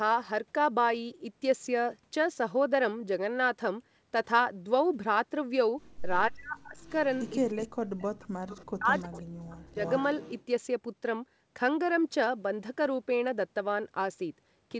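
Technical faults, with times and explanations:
6.29–6.79 s, 7.51–8.38 s and 8.67–9.78 s: speech suppressed in double talk. The voice dips by up to about 40 dB, likely because the echo canceller mistook overlapping talk for loudspeaker echo and turned everything down.
6.79–7.68 s, 8.01 s, 8.48–8.65 s, 8.96–9.18 s and 9.79–10.45 s: echo leak. A faint, delayed copy of the voice returns about 340 to 360 ms late, around 15 to 30 dB below the speech, likely residual loudspeaker pickup the canceller failed to remove.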